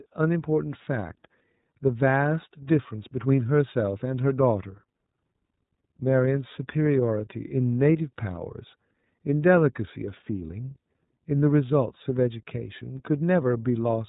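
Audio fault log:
Throughout: iLBC codec. The speech is clear but rough and slightly synthetic, with nothing above 3.8 kHz. Each frame's excitation is coded independently and coarsely, and that damage is plainly audible. The framing points to iLBC's 30 ms, 13.33 kbps mode.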